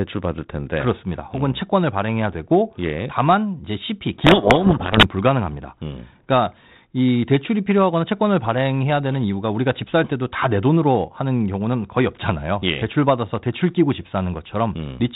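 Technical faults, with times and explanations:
4.22 to 5.07 s, codec payload misread: for about 0.85 s the two ends stopped agreeing on the bit order of the G.726 code words, so the decoder took each sample's difference code with its bits reversed and rebuilt the wrong steps from its adaptive prediction. The speech in that stretch is buried in harsh distortion, and it comes back clean once both sides read the words the same way again. Around it the 32 kbit/s G.726 path carries telephone-band speech with only light coding damage.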